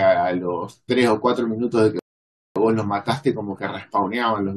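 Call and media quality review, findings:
Rebuffering stall, 1.99 to 2.56 s: speech cuts to silence for about 0.57 s, then resumes exactly where it stopped. Player buffer ran dry awaiting download. Unlike a dropout or packet loss, no speech is skipped; time is added instead.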